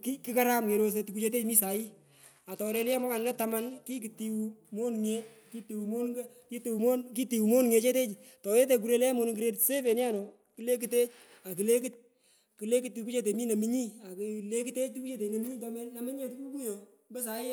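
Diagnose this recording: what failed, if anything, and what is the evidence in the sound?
Codec stage: a Bluetooth SBC bit pool drop, twice. After "kerosoi tukuchetechu mi" (1.60 to 4.02 s) and "monung grade" (9.57 to 10.62 s), treble dulls and gritty noise rises. Top sub-bands get starved of bits. This fits a bit pool falling from 28 to 12, near 96 kbps.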